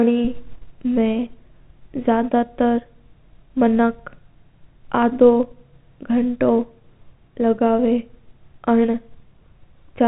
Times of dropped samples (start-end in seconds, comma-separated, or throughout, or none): none